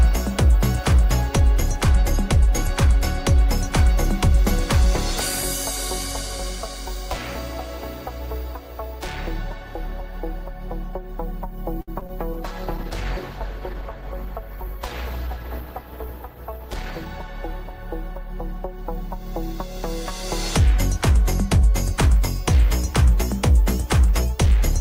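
Around 11.81 to 11.90 s the sound hangs on itself for about 62 ms, a held stretch with a slight buzz or dip. This is a short stall from a late packet. The jitter buffer ran dry, the receiver extended the last sound until the data arrived, and playback then resumed where it stopped, so nothing is lost but everything after runs 62 ms later. Just after, at 12.00 to 12.03 s and 12.07 to 12.11 s, come two brief smears. Each is a short concealed packet loss: about 20 ms of audio never arrived in time, and the receiver papered over each gap by continuing the preceding sound before blending back into the real signal.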